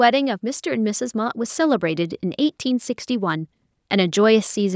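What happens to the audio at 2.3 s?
At 2.3 s the automatic gain control is partway through raising its gain, from 0.4 to 4.71 s, so speech and background swell together by about 7 dB overall.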